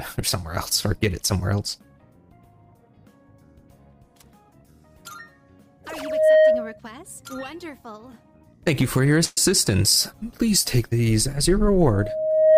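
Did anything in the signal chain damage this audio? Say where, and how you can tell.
Yes. Loudspeaker feedback squeal at 5.94–6.80 s and again from 11.92 s to the end: a single 626 Hz tone swells over roughly 0.4 s and then 0.7 s, rising to about 10 dB and then about 15 dB above the sound. The acoustic loop from loudspeaker into microphone has gain above one at that frequency.

Call audio freeze at 9.24–9.38 s: for about 124 ms the last sound is stretched into a fading buzz or hiss, then the audio picks up with nothing skipped, now running 124 ms later. This is likely delayed network packets draining the jitter buffer.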